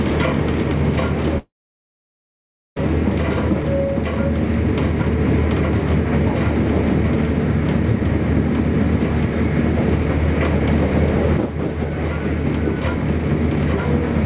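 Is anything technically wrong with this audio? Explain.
Yes. From 1.38 s to 2.78 s there is a long network dropout: the signal stops, a brief fading buzz carries the last sound forward, and then about 1.3 s of near silence follows before the audio resumes with that stretch missing. This is likely caused by incoming audio ceasing while the receiver's concealment stretched the final fragment and then gave up. Unlike a short packet-loss glitch, which leaves a quick warble, this gap lasts well over a second and the lost material never returns. The band limit at 4 kHz fits the G.711 call path.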